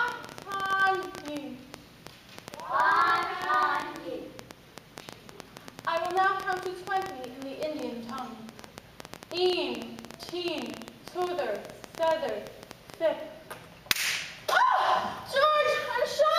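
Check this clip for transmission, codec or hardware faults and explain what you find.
One hardware-type fault is present: a train of clicks from 0.08 to 12.95 s, likely from electrical interference or a struggling interface injecting pulses, about 10.3 per second at uneven spacing. Well over a hundred similar clicks tick sharply above the sound, audible in pauses too.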